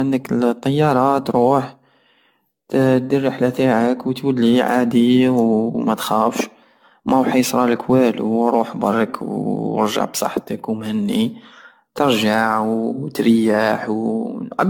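Speech with generation loss throughout: swirly, hollow, smeared attacks, nothing above 17 kHz, likely from about fifteen successive AAC-LC encodes around 96 kbit/s.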